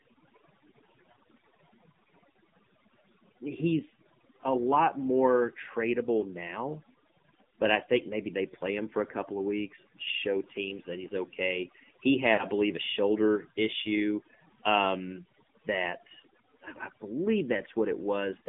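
Speech heard through a mobile call chain, with three technical faults. Overdone noise removal runs throughout: the suppressor pulls individual frequency bands down hard whenever they sit close to its noise estimate, so the background collapses to near silence dotted with twinkling specks, and the quieter parts of the voice are stripped away with it. On a spectrogram the gaps between phrases are almost black except for isolated short bright dots scattered at random, and the weaker harmonics inside words look patchy and broken. The AMR narrowband mobile codec also affects the whole clip, with plainly audible damage. Its vocal tract model, excited by only a few pulses per short subframe, makes the voice buzzy and synthetic, and the line passes only about 150 Hz to 3.6 kHz. The level of coarseness fits a 7.4 kbps mode. A spectrogram shows a hard ceiling with nothing above 3.6 kHz, a thin floor below 150 Hz, and smeared, blocky harmonics in between. 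Lost AMR speech frames occur from 12.34 to 12.45 s. Radio errors cost about 40 ms of speech, and the decoder filled the hole by repeating its last good pitch and vocal tract settings at falling gain. This causes a brief warbling smear and dip before the voice returns, rough for a moment. The waveform shows an envelope sagging over that span, while the spectrogram shows frozen, repeated harmonic stripes fading out.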